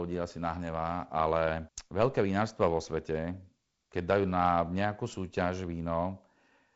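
No technical faults can be heard in this speech clip. It carries the sound of G.722 wideband telephone coding at 48 kbit/s, with nothing above about 7.7 kHz and only a light trace of the coding's own noise.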